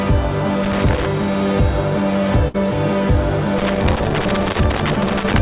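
From 0.64 to 1.06 s, a worn or dirty contact somewhere in the chain makes and breaks as it shifts. This is loose connector crackle: the signal is chopped on and off, giving an irregular burst of scratchy crackling over the sound.

At 2.48 to 2.56 s, a burst of packet loss means a run of audio never arrived in time to play. The receiver stretches the last sound for about 60 ms, fading it as a held buzz or hiss, then resumes with roughly 60 ms of the original skipped.

The loose connector crackle returns at 3.58 s and continues through 5.38 s, the same intermittent contact chopping the signal into ragged crackle and scratching that persists almost to the end. The band-limited call path, with nothing above 4 kHz and a sound consistent with G.711 mu-law, carries the crackle along.

Inside that stretch, at 4.52 to 4.56 s, a short concealed packet loss drops about 20 ms before decoding. The receiver patches the hole by extending the preceding sound, then blends back, leaving a brief smear or wobble where a short sound may vanish.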